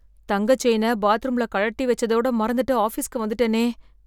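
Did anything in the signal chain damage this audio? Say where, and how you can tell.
No, nothing in this speech recording points to damage at any stage of the chain.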